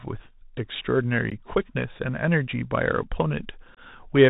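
From the start the speech sounds narrow and scratchy, with granular hiss and gritty s sounds: a Bluetooth CVSD headset codec, passing nothing above 4 kHz as its adaptive step struggles. At 1.30 s, and again from 3.75 to 3.79 s, abrupt holes of 15 ms and 22.5 ms appear: unconcealed Bluetooth headset packet loss, a couple and then a few voice packets dropped without repair.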